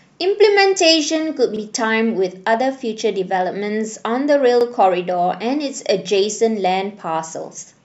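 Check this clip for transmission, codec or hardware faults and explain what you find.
The clip has one fault type, overlapping chunks, at two joins. At 1.57 to 1.61 s and again at 4.61 to 4.65 s, each new 3-second chunk begins 44 ms before the previous one ended, so that slice plays twice. It sounds like a brief stutter or click. On a waveform the repeated 44 ms segment appears duplicated, and a spectrogram shows a thin vertical seam.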